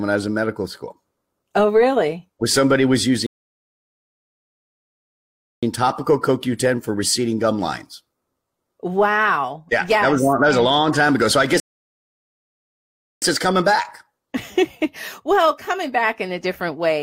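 A rebuffering stall at 3.26 s, just after "somebody was", cuts the speech to silence until 5.63 s, and a second stall from 11.6 s to 13.22 s ends right before "it's coming back". Each time, the player used up its downloaded audio and waited for more data, so the silences add about 2.4 s and 1.6 s. When the speech resumes, it picks up exactly where it stopped, with nothing skipped.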